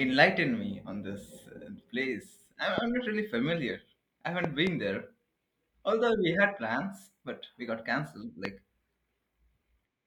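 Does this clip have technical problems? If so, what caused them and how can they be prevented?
Yes. A sudden voltage pulse, likely from a plug, switch, static discharge or driver glitch, was added to the signal, causing loud pops at 2.78–2.80 s and 8.45–8.47 s and a double pop between 4.44 and 4.69 s. Each pop is roughly 15 dB above the speech, which carries on underneath. To prevent this, secure all connections, ground the equipment properly and avoid switching devices during recording.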